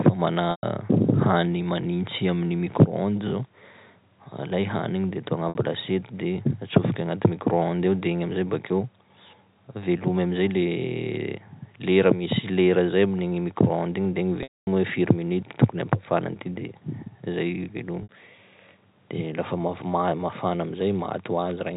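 Packet loss with pitch repetition strikes at 0.51 s, at 5.49 s just after "de atao", at 14.43 s and at 18.03 s. The receiver repeats the last pitch period across each gap. The 60 ms gaps sound like a brief buzzy hold, the 120 ms one fades, and the 240 ms gap at 14.43 s fades into silence before the band-limited telephone sound cross-fades back.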